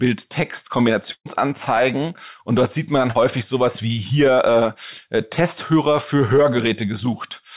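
At 1.12 to 1.27 s, a burst of packet loss means the receiver extends the last sound, fades it into brief silence, then resumes with about 140 ms of speech skipped. At 3.11 to 3.17 s, a short concealed packet loss leaves a few hundredths of a second undelivered; synthesized fill blends back in, heard as a brief smear within narrowband audio stopping at 4 kHz.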